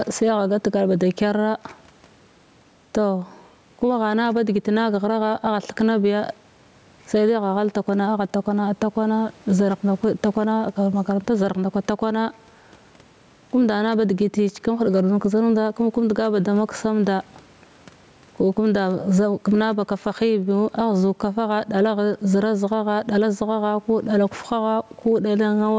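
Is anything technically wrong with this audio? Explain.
Yes. There is gain pumping throughout the speech. The gain swings by roughly 10 dB, pulled down each time the talker gets loud. Loud and quiet passages sit unnaturally close in level, so the delivery sounds squashed. The likely cause is input gain set far too high, with a fast limiter or compressor clamping down on each loud syllable. The room noise sits about 41 dB below the speech, and the call processing's 8 kHz top end is unaffected.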